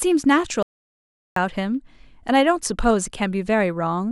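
The input feeding the recorder was likely lost for a moment, perhaps a dropped link or an accidental mute, while silence kept being written. From 0.63 to 1.36 s the speech is an audio dropout to silence, cut off mid-flow, with no room tone, and about 0.74 s is gone.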